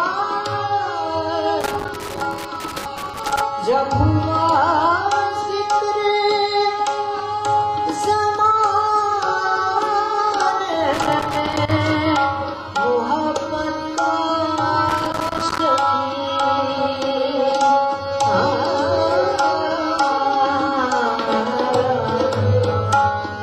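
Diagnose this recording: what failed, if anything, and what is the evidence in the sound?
Loose connector crackle appears three times, from 1.61 to 3.41 s, from 10.93 to 11.71 s, and from 14.89 to 15.59 s. These are irregular bursts of scratchy crackle, the first lasting nearly two seconds and the later two under a second each. The fault sits in the analogue wiring: a worn or dirty contact is making and breaking as it shifts, chopping the signal on and off, and any DC present on the line adds pops at each break.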